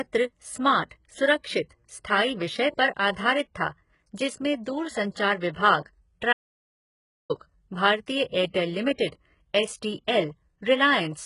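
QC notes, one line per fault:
throughout: HE-AAC compression, heavy. The treble appears rebuilt by spectral band replication, copied up from lower bands, so sibilants sound gritty and metallic, with nothing above 11.1 kHz. This likely comes from HE-AAC at a very low bitrate, consistent with roughly 12 kbps.
6.33–7.30 s: audio dropout to silence. The speech cuts off abruptly and returns mid-flow after about 0.97 s of silence with no room tone, which points to a likely loss of input while the recorder kept writing silence. Content in the gap is gone.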